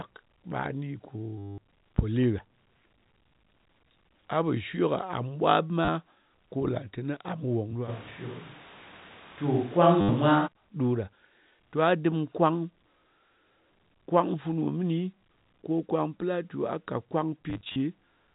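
Right at 1.38 s there's a packet loss with the last packet repeated, running to 1.58 s. The receiver kept replaying the last chunk it had, and since the repeats don't line up with the pitch you get a robotic buzz around 100 Hz, which fits 10 ms packets. Shorter stutters of the same kind hit at 5.85 to 5.88 s and 10.01 to 10.09 s. Then from 17.5 to 17.76 s there's a scattered burst where the runs are no longer than 40 ms, so it's more of a choppy flutter.

From 7.9 s to 10.46 s the sound suddenly goes roomy and hollow, with thinner bass and room noise about 25 dB under the speech, though the level stays about the same. That's likely a switch to a distant microphone, and it snaps back just as abruptly. Through all of this the G.711 telephone coding keeps everything under 4 kHz, as it should.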